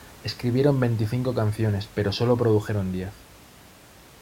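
Speech recording with no technical faults; the only background is ordinary room noise sitting about 25 dB below the speech.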